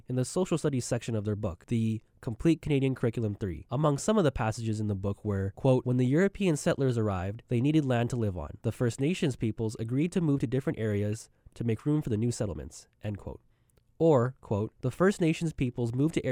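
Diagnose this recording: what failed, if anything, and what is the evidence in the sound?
Nothing in this speech recording points to a failure at any stage of the chain. No event in the sound calls for a diagnosis.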